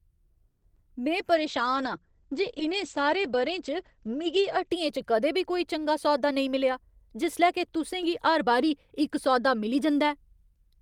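From 0.48 to 0.63 s the speech stalls into a fading buzz for about 140 ms, then resumes where it stopped. This is a call audio freeze, likely from delayed packets draining the jitter buffer. From 0.75 to 0.77 s a tiny smear marks short concealed packet loss: 10 ms never arrived, and the decoder patched it by extending the preceding sound. From 1.35 to 4.77 s the speech turns muffled and rough. A call bitrate drop from 40 to 14 kbps narrowed the bandwidth from 20 kHz to 8 kHz. From 6.28 to 8.71 s the speech sounds slightly hurried at unchanged pitch. This is a jitter buffer speed-up running at 105%, trimming roughly 150 ms of pitch periods to cut delay.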